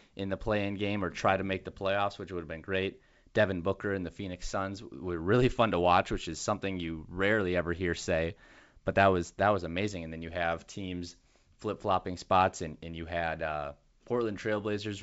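Nothing stood out on listening to this wideband telephone speech.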